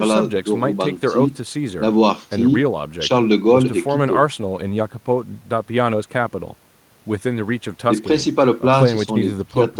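No technical faults are audible anywhere in this recording.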